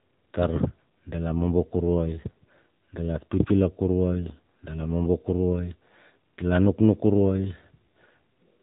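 Across the whole speech clip, the AMR narrowband mobile codec has left plainly audible damage. The sound was squeezed through an 8 kHz phone channel, so nothing survives above 3.8 kHz, and the vocal tract model's sparse pulse excitation gives a buzzy, synthetic edge, which fits a low mode of about 7.4 kbps. A spectrogram shows a hard ceiling at 3.8 kHz with an empty band above it for the full duration.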